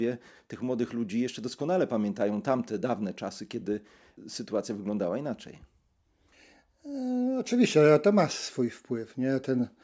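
Listening to the speech, nothing stood out as a technical fault at any point.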